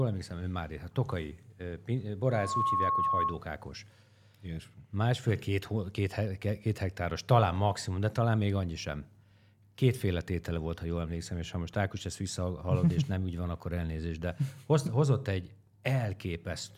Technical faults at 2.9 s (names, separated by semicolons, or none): loudspeaker feedback squeal